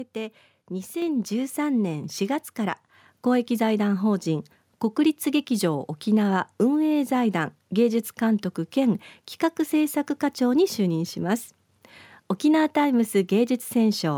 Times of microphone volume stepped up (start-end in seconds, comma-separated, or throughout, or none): 1.02